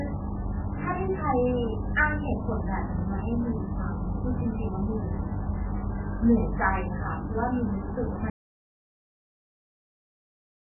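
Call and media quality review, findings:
MP3 compression, full clip: speech dull and watery, nothing above 2.9 kHz, heavy swirling on sibilants. Likely a very low-bitrate MP3 encode, consistent with roughly 8 kbps; encoder cuts treble and drops weak frequency lines frame to frame.

Audio dropout to silence, 8.3 s to end: speech cuts mid-flow into silence, no room tone. Likely input loss (link failure, device disconnect or mute) while the recorder kept writing silence; remaining speech is gone.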